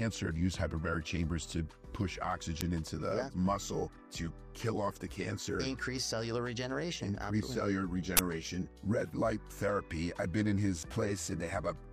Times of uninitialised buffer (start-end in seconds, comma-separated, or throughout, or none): 2.61, 8.17